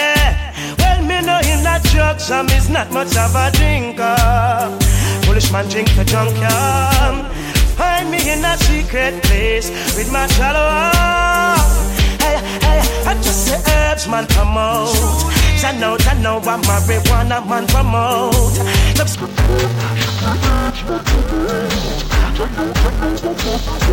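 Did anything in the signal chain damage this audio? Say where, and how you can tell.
Yes. From 19.14 s to the end at 23.92 s, a sample-format stage treats interleaved audio as planar. It reads each 2.9 ms block's first half as left and second half as right. Short blocks like these sound dull and robotic, buzzing at 345 Hz without an octave drop.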